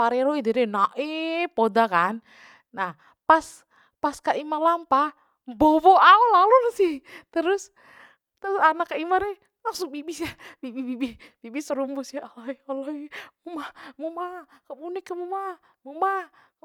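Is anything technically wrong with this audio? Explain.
No, nothing technically wrong can be heard in this recording.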